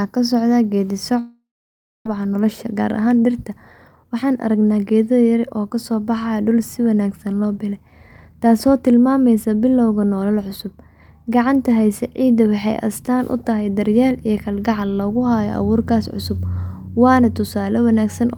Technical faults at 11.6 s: none

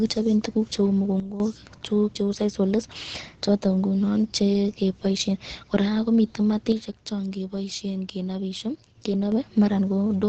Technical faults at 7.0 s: Opus compression; sudden gain jump

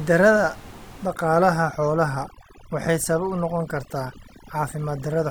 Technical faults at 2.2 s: overdone noise removal

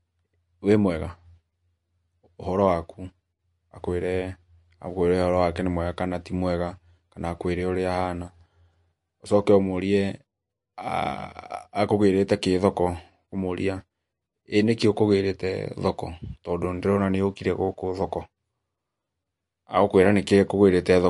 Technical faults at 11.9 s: MP3 compression

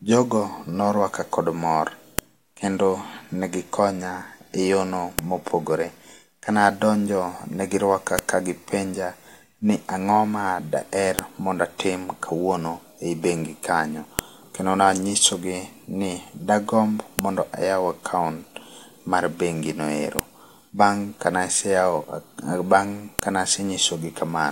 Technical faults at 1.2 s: none

